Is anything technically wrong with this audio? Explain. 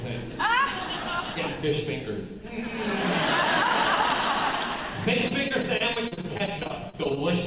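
Yes, there's a stretch of repeated packet loss, the robotic-sounding kind, from 5.28 to 7.18 s. Over those last couple of seconds there are 18 short holes, the longest 38 ms, and together they cover about a fifth of that span. Each hole gets patched by stretching the sound that came just before it, and the next one lands soon after. So the audio turns choppy, with bits missing. All this rides on a call path with nothing above 4 kHz, which points to a narrowband codec like G.711.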